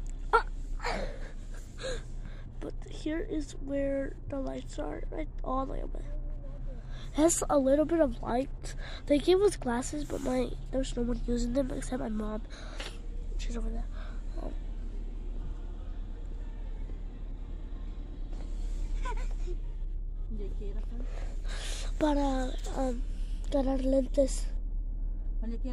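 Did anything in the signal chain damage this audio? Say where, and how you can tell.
No, nothing in the signal chain damaged this audio.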